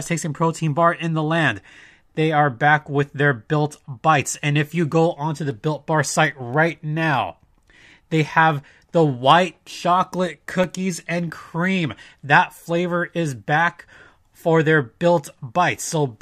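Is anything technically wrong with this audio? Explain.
Yes. From 5.51 to 10.64 s there are periodic USB or driver dropouts. Every 1.024 s, about a millisecond of speech drops to silence, around seven times. A background task is stalling the audio path. Each gap is heard as a regular tick.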